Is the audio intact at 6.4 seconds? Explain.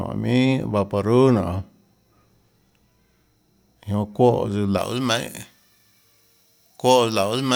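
No. At 6.4 s the speech is inside a stretch of pre-emphasis left on, running from 4.78 s to the end. The treble boost went in without the matching de-emphasis, lifting 10 kHz about 11 dB above 1 kHz, which fits a J.17 curve. The voice sounds thin, bright and sibilant.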